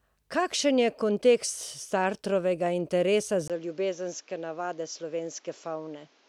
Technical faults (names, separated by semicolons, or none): input switched to a poorer device